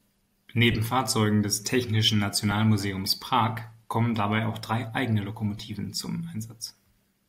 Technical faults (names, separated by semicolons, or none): lost LE Audio frames